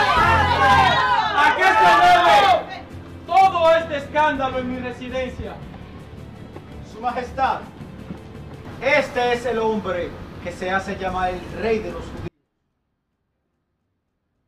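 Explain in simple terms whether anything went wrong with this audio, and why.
An audio dropout to a faint residue starts at 12.28 s and lasts to the end. The sound cuts off abruptly, leaving only a very faint trace far below normal level, likely because the signal was lost while the recording path stayed switched on.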